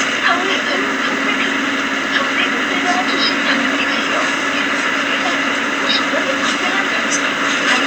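No technical faults can be heard anywhere in the audio.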